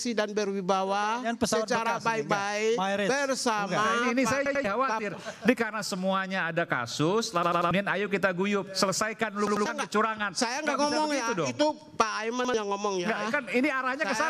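Repeated buffer stutters at 4.46, 7.43, 9.47 and 12.45 s: a 93 ms piece, which fits a 4096-sample buffer, replays one to three times with hard joins, repeating rather than dropping to silence.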